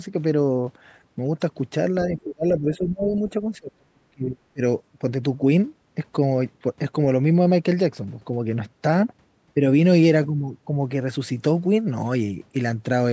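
A speech clip in which the talker's voice sinks by around 20 dB between 2.1 and 3.11 s, then drops by some 35 dB, nearly cutting out, from 3.59 to 4.62 s. This is speech suppressed in double talk, likely from an echo canceller that could not separate the talker from loudspeaker echo. At 3.17 s a faint scrap of the other side's voice leaking through sits far below the speech, probably residual echo the canceller left in the microphone signal. The call microphone processing shows up as nothing above 8 kHz.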